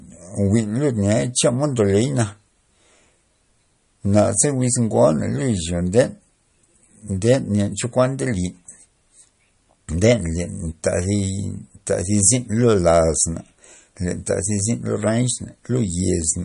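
The whole clip has a watery, swirly quality and nothing above 10.6 kHz, which points to likely MP3 compression at a low bitrate, somewhere around 40 kbps. At 5.99 s there's a brief burst of hard clipping, with peaks pushed about 3 dB past what the stage could pass, so they're cut flat and you hear a quick crackle.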